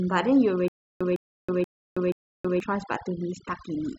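From the start to the end of the speech, overdone noise removal is audible: individual frequency bands near the estimated noise floor are cut almost to nothing, taking quiet speech detail with them. The background drops and breaks up into twinkling specks.

Between 0.68 and 2.60 s there is a stutter with silent gaps. A 157 ms fragment plays four times, each followed by about 323 ms of digital silence, a 480 ms cycle. This likely comes from a stalled stream replaying its last buffer, and the audio for that span is lost.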